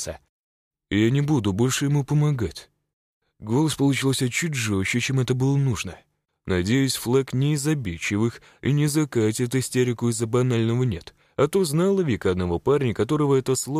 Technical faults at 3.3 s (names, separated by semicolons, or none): none